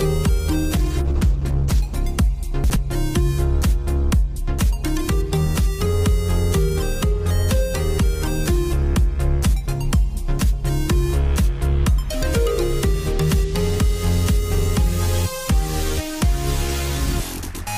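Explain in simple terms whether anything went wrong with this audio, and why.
From about 0.77 to 2.03 s there's a call bitrate drop. The connection briefly got squeezed, so the encoder had to describe the sound with far fewer bits. It goes rough and muffled, losing its crisp top end, then clears up once the rate recovers.

Then at about 2.64 to 2.76 s the chunks are out of order. A small slice of audio, roughly 60 ms, turned up one slot late and played after the piece that should follow it. You hear a quick jumbled blip.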